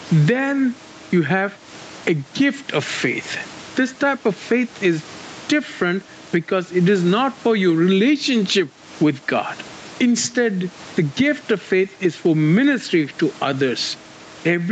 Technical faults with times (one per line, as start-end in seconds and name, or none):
0.00-14.72 gain pumping